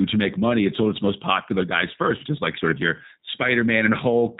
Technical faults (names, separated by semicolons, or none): G.729 codec